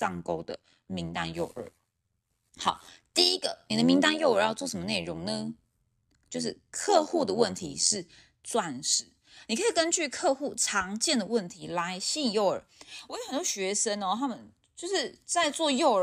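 Overlap-add ripple runs from 0.0 to 7.97 s. The speech was split into windowed frames and rejoined with an overlap whose windows don't sum to a constant gain, so the level swings by about 11 dB once per frame. The swings come around a hundred times a second, which points to short frames of roughly 10 ms. At that rate the ripple is heard not as tremolo but as a metallic buzz, with added tones around the voice.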